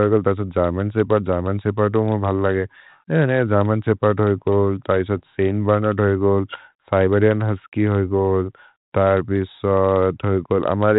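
At 5.17 to 5.20 s, just after "शेपर्द् होइ गोल् तै", bit errors on the ADPCM link cause a pop and rough burst. Flipped bits upset the decoder's step size and predictor, so the damage rings on briefly. The waveform shows a jagged spike with a brief level jump, and the spectrogram a vertical smear up to 4 kHz.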